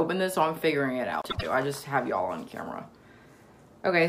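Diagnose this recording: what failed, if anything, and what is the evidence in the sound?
Between 1.22 and 1.43 s the sound briefly turns into a garbled flutter, and no time goes missing. This is frames out of order at the network or transport stage. Two adjacent blocks of about 78 ms each, which fits runs of three codec frames, arrived swapped and were decoded as received, so the second half of that stretch plays before the first.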